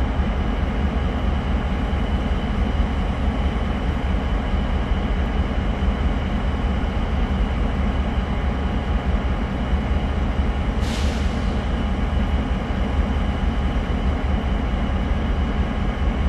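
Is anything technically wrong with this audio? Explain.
No, nothing here sounds technically off; these sounds come across just as they should, with no faults to point to.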